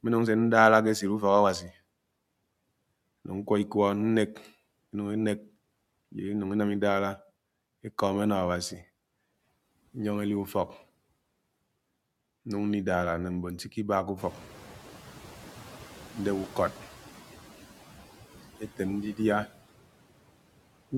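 Noise suppressor artifacts run through the whole clip. The suppressor estimates the steady background and pulls down each frequency band it judges to be noise, frame by frame, here by about 17 dB. As a result the background drops away in the gaps between words and comes back up beneath the speech.

Speech cut by the noise suppressor occurs from 1.6 to 1.71 s, right after "ke echid". For roughly a tenth of a second the suppressor treats part of the speech as background and turns it down with the noise, by up to about 10 dB. The soft sound there comes out swallowed and faint.

The noise suppressor is catching up from 14.17 to 16.84 s. The room noise jumps by about 18 dB at around 14 s, bringing it to about 18 dB below the speech. The suppressor's noise estimate lags that rise, so the louder background at first passes with less reduction. Over the next 2.67 s the estimate adapts and the noise sinks back, with about 8 dB cut during this stretch.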